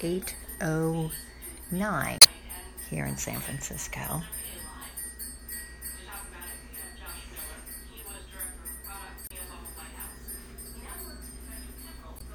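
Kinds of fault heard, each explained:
Damaged data in a compressed stream: three short disturbances cut in at 2.18 to 2.26 s, 9.27 to 9.32 s and 12.17 to 12.22 s, where corrupted bytes made the decoder misread frames and lose sync until it found the next frame header.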